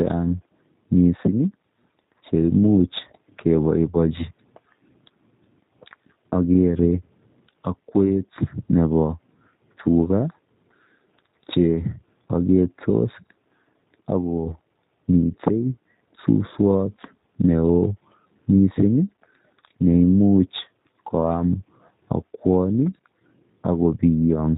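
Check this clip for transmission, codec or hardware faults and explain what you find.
Two faults are audible: coding damage from a low-rate speech codec across the whole recording, and one brief concealed packet loss.

G.729 codec, throughout. The speech is rebuilt from a vocal tract filter, a pitch estimate and a few pulses per short frame rather than carried as a waveform, which fits an 8 kbit/s G.729A stream. Nothing above 4 kHz survives. The damage is plainly audible: the voice is muffled and slightly rough, with a synthetic edge, and any background noise warbles.

VoIP packet loss concealed by the speech codec, 1.27 to 1.29 s. The gap sounds like a single lost 10 ms frame. With no data for that frame, the decoder carries on from its last pitch and filter settings at reduced gain, and because each frame builds on the one before, the following audio stays briefly weakened before it recovers. 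It is heard as a short smear where the speech momentarily loses its detail, followed by a subdued stretch.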